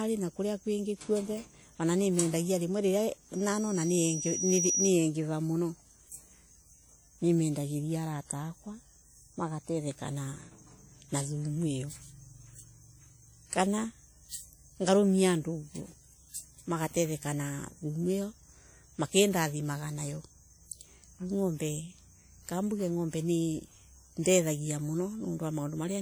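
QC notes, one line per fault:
Throughout: WMA compression, likely the cause of plainly audible codec damage. The speech carries ringing, washy smearing and a hiss that breathes with the signal. Long transform blocks spread quantisation noise over tens of milliseconds, and the damage fits a bitrate around 48 kbps.
3.34–4.94 s: loudspeaker feedback squeal. A single 5.8 kHz tone swells for roughly a second and a half to end up about 5 dB above the speech. The microphone re-captured its own loudspeaker, and loop gain exceeded one at that frequency.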